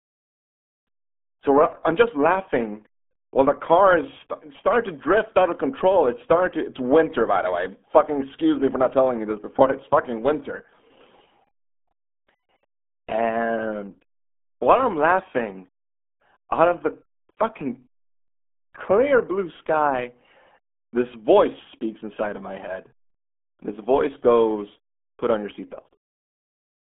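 Speech squeezed through the RealAudio 14.4 codec the whole way through: nothing above about 3.7 kHz, a phone-like band of roughly 200 Hz to 3.4 kHz, and heavy gargly, muffled smearing that fits an 8 kbit/s dial-up-era stream.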